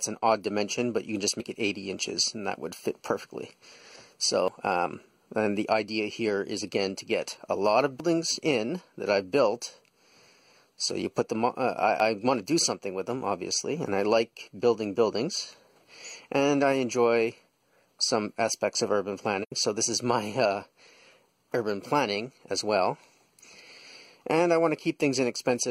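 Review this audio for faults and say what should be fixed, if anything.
At 1.40 s, 4.48 s and 12.00 s the audio jumps forward with no gap, skipping roughly 40 ms, 70 ms and 40 ms respectively. The likely cause is a dropped buffer (overrun): the capture side fell behind, the hardware overwrote unread samples, and the surviving pieces were spliced directly together. Prevention: raise the capture thread's priority or enlarge the buffer so reads always complete before the hardware wraps around.

From 19.42 s to 19.52 s there is a soft-edged hole of about 85 ms. The sound fades down and back up, which fits AAC frame loss with muting across two frames. The decoder zeroed the missing spectra, and the overlapping transform windows smoothed the edges into a soft-edged hole rather than a hard cut. Prevention: protect the transport with retransmission or error correction, or use decoder concealment that reconstructs lost frames.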